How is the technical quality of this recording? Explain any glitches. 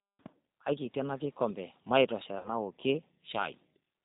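The recording has audible technical problems: plainly audible low-bitrate codec coloration throughout, and one brief dropout.

The G.729 codec (the G.729A variant) has been applied across the whole clip. The encoder discards the actual waveform and keeps only a vocal tract filter, a pitch predictor and a handful of pulses per 5 ms half-frame, which fits an 8 kbit/s rate. Nothing above 4 kHz survives, so the speech sounds band-limited, and the crude pulse excitation gives it a plainly rough, slightly synthetic texture.

VoIP packet loss concealed by the speech codec occurs from 2.38 to 2.49 s. About 60 ms of audio went missing, consistent with three 20 ms packets. The decoder filled the gap by repeating its last pitch and filter settings at steadily falling gain. The result is a short stretched sound, a buzzy tone or coloured noise, that fades. Because each frame depends on the previous one, the sound stays weak or distorted briefly after audio resumes, until the decoder state recovers.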